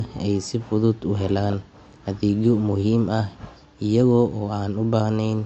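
Throughout the clip the speech has plainly audible coding damage and nothing above 8.4 kHz, a hard ceiling on the treble. The likely cause is MP3 compression at a low bitrate, which fits a rate around 48 kbps. With so few bits, the encoder discards the band above a fixed cutoff and spends what remains on the components its hearing model rates as most important, so quieter detail is dropped.

From 1.50 to 1.54 s there are chunks out of order. A 20 ms chunk arrived one chunk late and plays after the chunk that should have followed it. No audio is missing, but the two 20 ms pieces are swapped, creating three hard joins within 40 ms. These are heard as a brief jumbled flicker.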